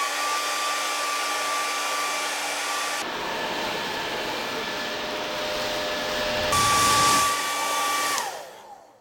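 From about 3.02 s to 6.53 s the clip runs into an interleaved-audio-read-as-planar fault. Each block of alternating left and right samples gets split down the middle, so the first half is treated as left and the second as right, each stretched to half speed. With blocks only 10.88 ms long, you don't get an obvious octave drop. Instead the sound goes dull and robotic, with a buzz sitting at roughly 92 Hz, the block rate.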